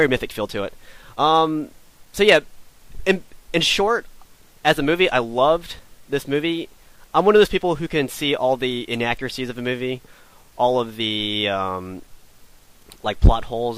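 Clock drift between sender and receiver runs through the whole clip: the sending device's clock is ahead of the receiver's by roughly 4 percent, so audio arrives a little faster than it is played out and the jitter buffer keeps filling. To keep that buffer from overflowing, the receiver has to throw away short slices of audio again and again. The result is an unsteady pulse, with small skips recurring at irregular spacing instead of a clean, continuous flow.

Those repeated timing corrections run from 0.07 s to 13.54 s, where the receiver trims material so the stream plays at about 104 percent of its proper pace. Every edit goes the same way, removing a tiny piece, but the cuts land at uneven intervals. Each one is brief, so if heard at all it registers as a slight hiccup or stumble, and together they give the sound a faintly hurried, uneven tempo across nearly the entire clip.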